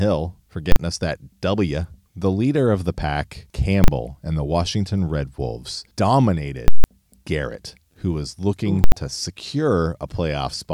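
Invalid numbers at full scale occur at 0.72–0.76, 3.84–3.88, 6.68–6.84 and 8.84–8.92 s. A failed calculation pinned the output to its limit, producing loud bangs. The 160 ms block at 6.68 s gives a pop at each edge with silence between. On the waveform these are flat slabs far beyond the speech peaks, and on the spectrogram broadband stripes.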